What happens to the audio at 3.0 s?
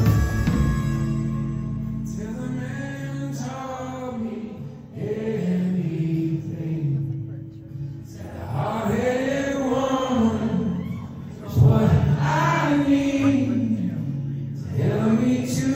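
Nothing goes wrong at 3.0 s; the audio plays through that moment intact, with no dropout, click or other fault.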